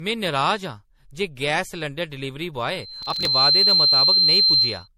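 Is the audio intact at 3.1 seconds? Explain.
No. At 3.1 seconds the speech is affected by three overlapping faults.

A piercing tone at 4.1 kHz is present here. It starts at 2.70 s, just after "सलैंडर डलीवरी", swells over roughly a second until it sits about 10 dB above the speech, and lasts until 4.88 s. This is a loudspeaker feedback squeal. A microphone was hearing the loudspeaker it fed, and at 4.1 kHz the loop gain went above one, so that frequency kept feeding on itself and grew.

Riding on top of the squeal, from 3.03 to 3.27 s, is a gritty, tearing crackle. The sound stutters with tiny hard-edged dropouts packed closely together, then clears. This is processor overload crackle. The processor could not finish its audio buffers in time, and a run of around thirty deadlines was missed. Each missed buffer, about 5 ms long, was simply skipped, leaving a rapid chain of small gaps.

Throughout the clip, and so at this moment too, the speech sounds swirly, hollow and smeared, with softened consonant attacks and nothing above 16.5 kHz. 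That is more damage than a single 64 kbit/s MP3 would cause. The likely explanation is generation loss from the audio being encoded to MP3 around seven times. Each new pass requantised the sound on a shifted frame grid, so the noise and spectral gaps built up.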